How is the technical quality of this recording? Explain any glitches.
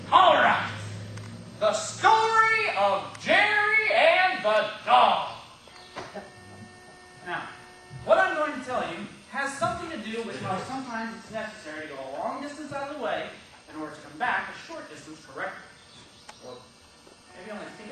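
Nothing here sounds amiss: there are no glitches to explain, and the recording holds steady the whole way.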